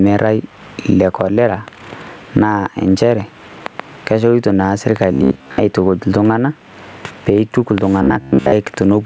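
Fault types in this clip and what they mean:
Gain pumping: gain swings about 15 dB, pulled down on every loud sound, likely from excessive input gain feeding a fast limiter, unlike a gate's abrupt cuts.
Robotic sound from repeated short buffers: at 5.13 and 8.03 s, a rigid 66.7 Hz buzz, likely from repeating a 15 ms buffer over most of the audio; its fixed pitch separates it from codec warble.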